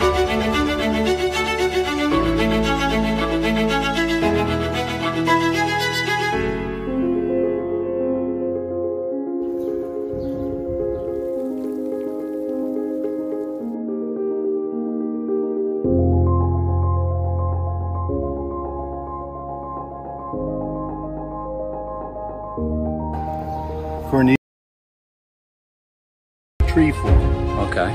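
The input was likely lost from 24.36 to 26.60 s, an audio dropout to silence: the sound cuts off mid-flow into 2.25 s of total silence without room tone.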